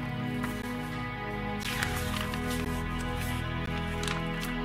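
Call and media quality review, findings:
Gap between chunks: stream delivered in 1.0 s chunks with a 13 ms silence at each join. Holes at 0.62, 1.63, 2.65 and 3.66 s. No sound lost, only interrupted.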